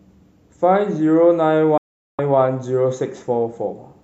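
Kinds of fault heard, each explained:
Digital broadcast dropout: the speech is cut off at 1.78 s with a very fast fade of about 3 ms and stays completely silent until 2.19 s, so roughly 0.41 s of the programme is gone rather than delayed. This is a receiver muting after losing its signal or rejecting corrupted frames, and the length of the gap fits a run of about seventeen lost frames. There is no concealment fill, stutter or repeated sound, as a packet-loss glitch would produce, and the speech resumes at its ongoing point.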